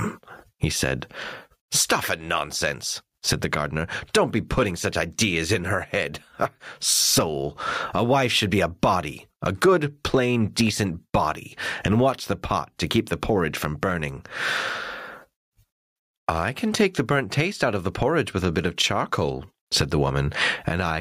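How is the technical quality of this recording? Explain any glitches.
The recording suffers from gain pumping that runs through the whole clip. The input gain is likely set far too high for the microphone, so a fast limiter or compressor keeps clamping down on every loud sound and then releasing. The level swings by roughly 25 dB. Loud and quiet passages end up squashed close together, giving a breathing, flattened sound.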